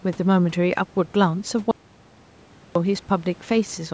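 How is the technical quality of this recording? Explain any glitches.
The recording has one clear glitch. From 1.71 s to 2.75 s the speech cuts out into dead, total silence, with no room tone at all, and resumes abruptly about 1.04 s later. This audio dropout to silence likely comes from the input being lost briefly while the recorder kept writing silence, so whatever was said in that second is gone. The call microphone processing limits the sound to below 8 kHz, which is normal for a call.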